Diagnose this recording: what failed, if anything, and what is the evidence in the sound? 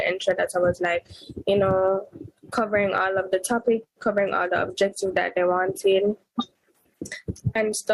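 The gain breathes throughout the clip, with a swing of around 10 dB. Loud and quiet passages sit unnaturally close in level, leaving the whole thing squashed. This is gain pumping, likely from input gain set far too high at the microphone stage, with a fast limiter or compressor in the processing chain clamping down on every peak and releasing in the pauses.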